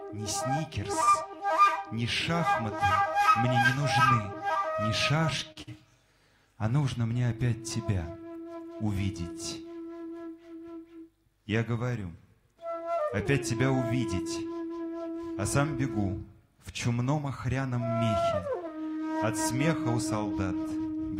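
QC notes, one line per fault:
1.03–1.09 s, short stall from a late packet: the buffer ran dry, so the last sound is held about 38 ms too long, then picks up with nothing lost.
1.11–1.15 s, short concealed packet loss: about 20 ms never arrived, and the receiver papered over it by extending the previous sound, giving a quick smear or wobble.
5.52–5.58 s, short stall from a late packet: the same thing again. A packet showed up late, so the sound hangs about 39 ms before carrying on from where it stopped.
5.62–5.69 s, burst of packet loss: about 40 ms went missing in one go. The filler continues the last sound and fades it, then the audio jumps ahead.
13.87–14.45 s, jitter buffer speed-up: the receiver trimmed tiny pitch-period slices to drain a backed-up buffer, so the audio runs about 8% fast at the same pitch, roughly 50 ms gone in total.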